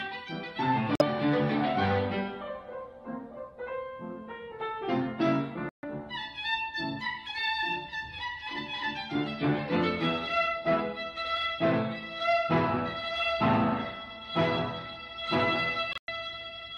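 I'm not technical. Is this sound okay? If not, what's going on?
No. There are three short dropouts where the sound cuts abruptly to silence, at 0.95 s, 5.69 s and 15.91 s, lasting roughly 0.07, 0.16 and 0.17 seconds. This is a corrupt frame muted fault: small chunks of the recording got damaged, so the player replaced them with silence. The timing stays in step afterwards.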